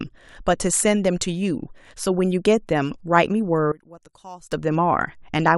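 Speech that abruptly collapses from 3.72 to 4.52 s, dropping about 21 dB and turning faint, with the centred voice and background nearly gone. This is likely one channel inverted: with reversed polarity, the shared content cancels when the stereo channels are summed to mono.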